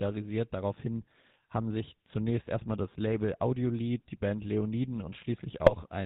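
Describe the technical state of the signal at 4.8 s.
At 4.8 s, as throughout, the speech carries GSM full-rate codec damage. Coarse pulse-driven excitation leaves a buzzy, gravelly roughness, not just the dull 4 kHz ceiling of a plain band-limit.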